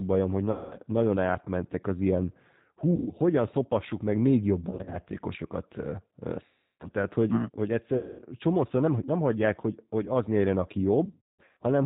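It's a speech clip carried over the G.729 codec the whole way through, at 8 kbit/s, so the top end stops at 4 kHz and the voice has that slightly rough, synthetic edge the pulse-based rebuild gives it. On top of that there's VoIP packet loss concealed by the speech codec at 0.51, 2.96, 4.71, 6.46, 7.97 and 11.05 s, with gaps from 100 ms up to 420 ms, the ones at 4.71 and 11.05 s scattered rather than solid. Each time the decoder stretches the last sound into a fading buzzy tone or coloured noise and stays weak a little after packets resume.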